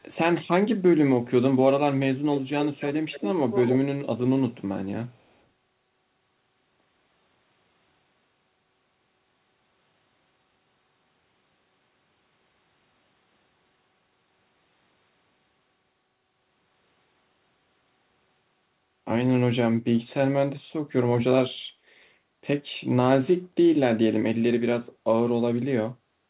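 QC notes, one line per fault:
2.6–3.31 s, 3.51–3.76 s and 5.29–5.34 s: echo leak. A delayed copy of the speech trails the original by about 272 ms, sitting about 10 dB below it in the first two stretches and about 40 dB down, barely a ghost, at 5.29 s. The likely cause is a far end playing the call on a loudspeaker whose echo canceller let part of the mic pickup through and returned it, so the talker's own sound comes back late and weaker.
21.74–21.85 s: background gated by the echo canceller. The room tone dips by about 7 dB for roughly a tenth of a second, then recovers. While loudspeaker output was present, the canceller clamped the microphone gain to suppress echo, which pulled the ambient bed down with it. When it released, the background returned, so the clip has a brief hole in the room sound. The band above 4 kHz, absent under the G.711 A-law call path, shows no change.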